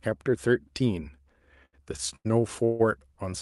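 Speech carried over a WebRTC call path shows repeated stalls (stutter) from 1.65 to 2.27 s: four short holds, the longest 90 ms, where the last sound is stretched to cover late packets, so about a third of that span is filler. On a spectrogram these appear as smeared, flattened bands between sharper syllables. A call audio freeze follows at 2.65 to 2.81 s, a single 147 ms continuation of the last sound that fades. Its likely cause is a sudden delay jump that emptied the jitter buffer. In the waveform it shows as a decaying tail before speech resumes, with content above 12 kHz absent throughout, consistent with Opus.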